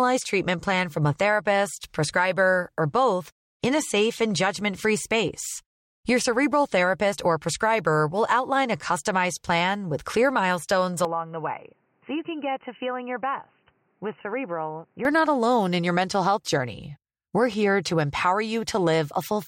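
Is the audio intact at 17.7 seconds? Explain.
Yes, at 17.7 seconds the speech runs on intact, with no dropout, click, distortion or other fault audible at that moment.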